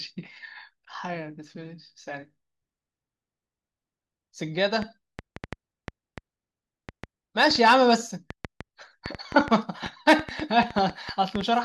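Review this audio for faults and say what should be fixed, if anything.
A likely source of interference, such as nearby equipment or a faulty connection or power supply, injects a train of clicks from 4.82 s to 11.42 s. Similar sharp pulses arrive at about 4.4 per second on an uneven rhythm, some thirty in all, peaking roughly 10 dB above the speech. They sound like ticking over the talking and stay audible in the pauses between phrases. Moving the interface away from other equipment, checking its connections and power, and monitoring while recording would prevent this.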